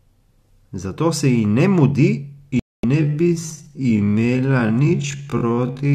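A speech recording with a digital broadcast dropout at 2.59 to 2.84 s: the sound mutes to silence for about 240 ms, which fits roughly ten lost frames, and resumes further on with that stretch of programme missing. That clean hole with nothing skipped backward sets it apart from a stutter or a slow fade. From 2.95 s to the end the pace abruptly drops to about 0.52 times normal while pitch holds steady. This is likely a time-stretched section, since a slowed tape or wrong sample rate would also drag the pitch down.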